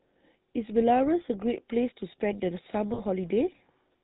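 Throughout, the speech has a buzzy, gravelly roughness with nothing above 4 kHz, the plainly audible damage of the GSM full-rate codec, which fits its 13 kbps rate. It rebuilds the vocal tract from a model driven by coarsely spaced pulses, discarding fine excitation detail.

From 2.94 to 3.01 s the sound briefly hangs in a rough, metallic ring for about 40 ms. These are lost GSM frames, which points to two missing frames. The decoder filled the gap by repeating the last good frame.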